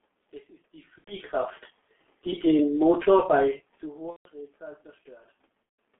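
From start to end the speech sounds muffled and hoarse, with smeared consonants and nothing above about 3.5 kHz. This is heavy G.723.1 codec damage: a 6.3 kbit/s telephony codec coding 30 ms frames with a slowly updated voice model, inside a 200 Hz to 3.5 kHz line band.

At 0.98 to 1.14 s, 4.10 to 4.28 s and 5.63 to 5.78 s the speech is stretched out, fades and cuts out before recovering. This is VoIP packet loss concealed by the speech codec. About 90 ms and then 150 ms twice went missing, which fits three and five lost 30 ms frames. The decoder extended its last pitch and filter with falling gain.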